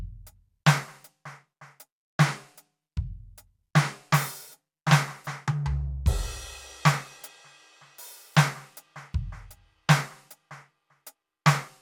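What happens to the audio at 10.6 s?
At 10.61 to 10.66 s the music breaks into a brief burst of DAB burbling over the programme. Weak reception let a small fraction of a percent of bits slip past error correction, so corrupted samples put short blips of noise in individual sub-bands and corrupted scale factors make sub-bands leap in level. The 50 ms span fits about four damaged audio frames. Unlike a dropout, the sound never goes silent; it blips within individual sub-bands instead.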